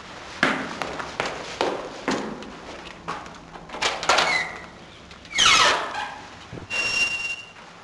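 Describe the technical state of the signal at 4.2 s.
At 4.2 s the signal is intact, with no dropout, clipping, distortion or other audible fault in the sound at that moment.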